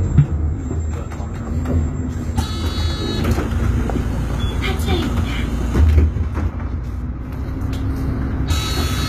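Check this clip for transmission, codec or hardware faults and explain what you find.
One codec fault runs through the whole clip: plainly audible HE-AAC compression damage. Throughout, the treble sounds gritty and metallic, and nothing is present above 14.9 kHz. The likely cause is spectral band replication, which fills the top octaves with copied lower bands under a coarse envelope. The rebuilt harmonics do not align with the real ones, which fits a low bitrate of about 20 kbps.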